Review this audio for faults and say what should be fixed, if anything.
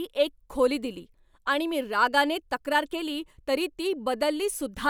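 Nothing here needs fixing; no faults are audible.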